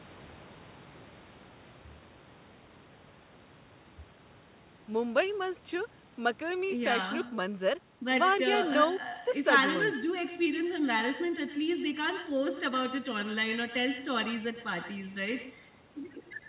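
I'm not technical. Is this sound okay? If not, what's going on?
No. All the way through this speech recording there's an echo with no canceller. The far end plays the call on a loudspeaker, its microphone catches it, and nothing strips it out. Each phrase returns about a tenth of a second later as a fainter, thinner copy trailing just behind.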